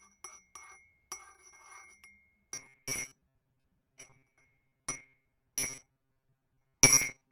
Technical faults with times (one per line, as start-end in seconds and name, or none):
2.52-7.32 robotic sound from repeated short buffers